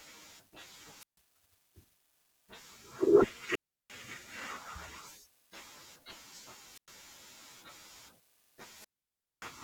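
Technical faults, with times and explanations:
0.98–1.18 s, 3.49–3.92 s, 6.73–6.88 s and 8.70–9.55 s: wireless microphone squelch dropout. Each time, the analogue FM radio link from the microphone weakens until the receiver's squelch decides the signal is too poor and mutes its output. The fading carrier first lets hiss and static rise. Then the speech drops into near silence, for about 143 ms, 345 ms, 103 ms and 578 ms respectively, before returning as the signal recovers.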